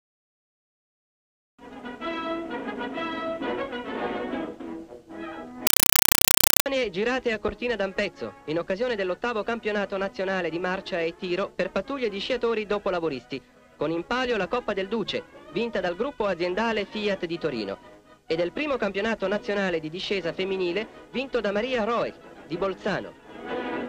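From 5.67 s to 6.66 s the audio is replaced by chattering static: short bursts of noise, each about 5.33 ms long, repeating 31.25 times a second with gaps between them. This is a compressed stream played as audio. An AC-3 (Dolby Digital) bitstream, which fits a 256 kbps stream, was passed along a digital link and treated as ordinary samples instead of being decoded. Each frame's data comes out as a noise burst followed by padding.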